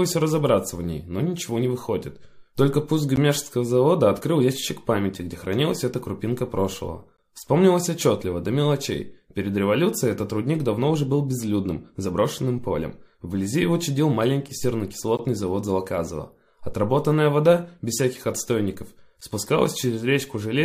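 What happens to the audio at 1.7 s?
Nothing goes wrong at 1.7 s; the audio plays through that moment intact, with no dropout, click or other fault.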